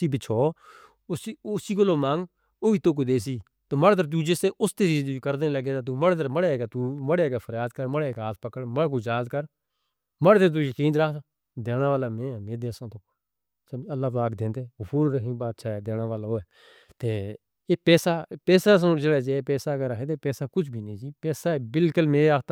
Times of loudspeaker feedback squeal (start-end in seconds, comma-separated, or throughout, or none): none